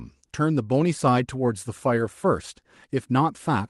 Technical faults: none

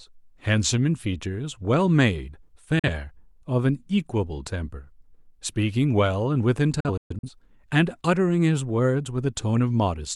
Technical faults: digital broadcast dropout

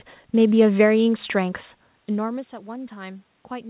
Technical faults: automatic gain rising

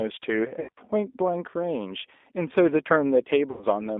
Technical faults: G.729 codec; VoIP packet loss concealed by the speech codec

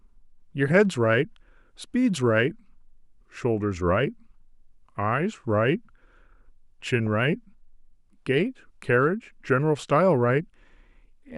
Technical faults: DAB burbling

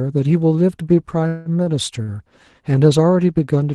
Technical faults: call audio freeze; short stall from a late packet

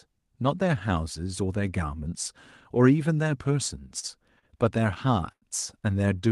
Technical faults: short stall from a late packet

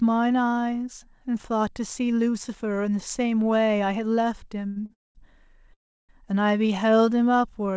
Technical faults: short stall from a late packet; call audio freeze; jitter buffer slow-down

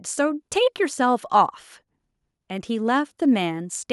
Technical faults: none

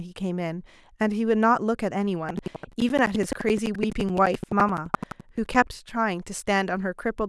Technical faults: buffer tearing

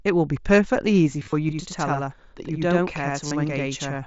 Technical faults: concealed Bluetooth headset packet loss; channel delay (doubling)

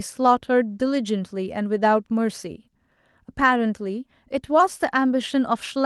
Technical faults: lost packet rebuilt from error correction

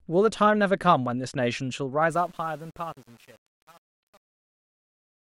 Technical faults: truncation distortion on a fade

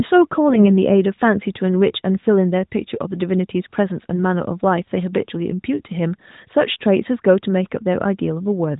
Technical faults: AMR bit errors

